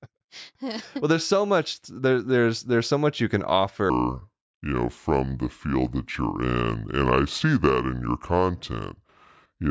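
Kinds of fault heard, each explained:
Wrong sample rate: from 3.90 s, just after "so much you can", to the end, the speech plays at 0.726 times its speed and about 5.6 semitones lower, sounding low and dragged, which fits audio recorded at 22 kHz being played at 16 kHz without conversion.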